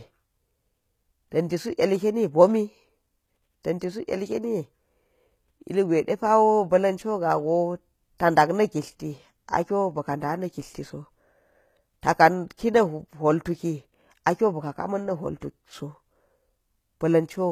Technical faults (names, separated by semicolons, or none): HE-AAC compression